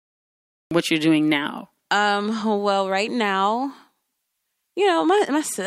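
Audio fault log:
0.00–0.71 s, cut-off start: digital silence until 0.71 s, where the speech bursts in mid-sound with no natural onset because capture began late.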